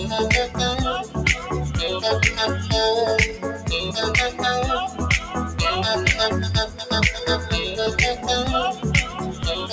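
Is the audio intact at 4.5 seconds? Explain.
No. A noise suppressor applied to music or sounds runs throughout, including 4.5 s. It treats sustained tones and tails as noise, so levels pump by about 10 dB.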